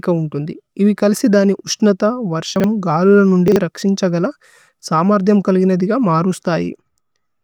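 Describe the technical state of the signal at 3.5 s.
A 40 ms chunk was written one slot late, leaving chunks out of order from 3.48 to 3.56 s: a jumbled blip.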